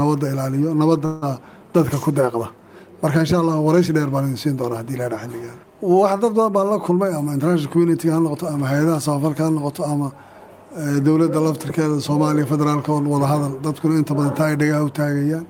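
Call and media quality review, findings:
Call audio freeze at 1.05–1.24 s: sound stalls and is stretched into a fading buzz for about 165 ms, then picks up where it left off. Likely held-up packets draining the jitter buffer. Nothing lost, but latency jumps 165 ms.

Jitter buffer speed-up, 6.90–8.55 s: audio runs about 9% fast, pitch unchanged, a bit rushed. Receiver trimming pitch-period slices back to back, around 150 ms total, to shed the extra buffered delay.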